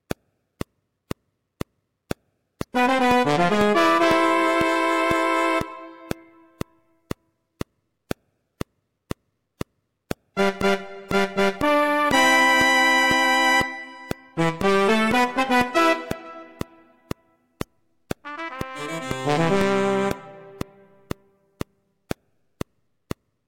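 Hard clipping runs throughout: peaks driven about 5 dB past full scale are flattened, roughly half a percent of samples, giving crackle on loud moments, flat-topped waveform peaks and bright spectrogram smears.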